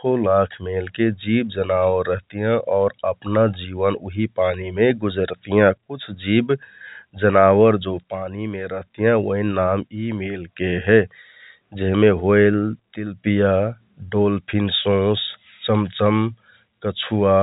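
The speech carries no technical faults, only the narrow telephone band of G.711 coding with nothing above 4 kHz and, at most, a faint level-following quantisation hiss.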